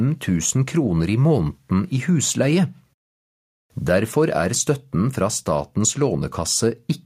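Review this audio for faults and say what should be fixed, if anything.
Nothing to fix: no faults detected anywhere in the clip.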